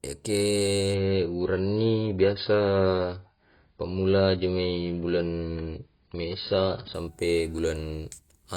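From 0.94 s to 6.94 s the adaptive stream switches abruptly to a lower bitrate. The speech sounds dull and grainier, with nothing above 5.1 kHz. A spectrogram shows a flat ceiling there, while the waveform shows no gap. This fits an AAC drop from 96 to 16 kbit/s.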